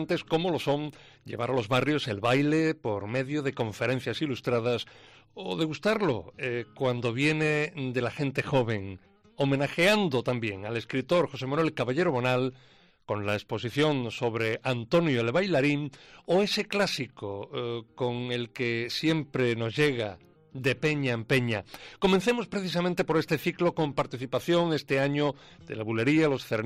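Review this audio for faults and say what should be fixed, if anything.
Nothing to fix: no audible faults anywhere in the recording.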